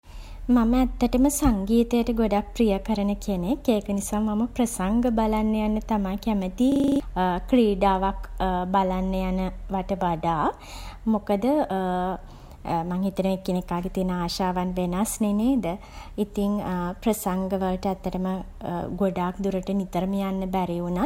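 At 6.72 s the speech locks into a system hang loop that lasts until 7.0 s. The machine or its audio driver stalled while the output hardware kept replaying its ring buffer, so one 40 ms slice repeats seven times at 25 Hz and sounds like a coarse, rattling buzz. What sets this apart from a dropout or concealment glitch is that every repeat is identical rather than silent or smeared. About a third of a second of speech is lost.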